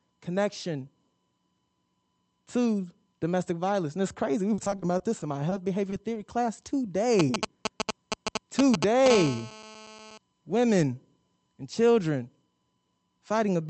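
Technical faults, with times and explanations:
4.54–5.54 s, repeated packet loss (robotic sound): packets went missing again and again, eight gaps of up to 40 ms each, with each hole patched by extending the last sound. About 18% of the stretch is filled in and 140 ms is lost outright, so the speech turns choppy and robotic.
5.90 s, short stall from a late packet: one packet arrived about 20 ms late and the jitter buffer ran dry. The receiver held the last sound for 20 ms and then resumed where it left off, so nothing is lost, but the sound hangs briefly with a faint buzz or dip.
6.14 s, short concealed packet loss: 20 ms of audio never reached the decoder in time. The receiver filled the hole by continuing the preceding sound and then blended back into the real signal, leaving a brief smear or wobble where a fragment of speech is missing.
7.19–9.08 s, GSM signalling bursts: a nearby 2G phone was signalling to the network, and the audio circuit rectified its short groups of radio bursts. 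The result is a galloping dit-dit-dit of brief 217 Hz buzzes, roughly as loud as the speech.
9.10–10.18 s, GSM phone buzz: a nearby 2G phone in a call transmitted steadily at 217 bursts per second. Rectified pickup of that pulse train gives a hard, raspy 217 Hz buzz rich in harmonics, about 10 dB below the speech, which stops just before "women and children".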